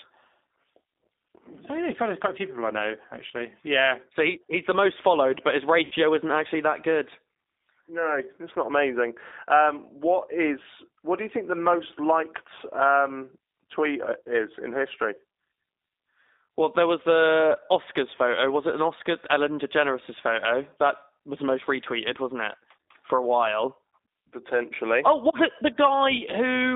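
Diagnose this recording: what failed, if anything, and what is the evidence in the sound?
The speech runs through a G.729 codec at 8 kbit/s, a codec-stage fault you hear for the whole clip. The band sits between 250 Hz and 3.7 kHz, and the rough, slightly synthetic texture comes from rebuilding the speech out of a vocal tract filter and a handful of pulses.

At the network stage there's VoIP packet loss, concealed by the speech codec, from 5.85 to 5.94 s, right after "most followed but his" and before "isn't actually that good." About 60 ms went missing, which fits three lost packets. The decoder stretched its last pitch and filter into a fading sound, and the speech stays weak as it recovers.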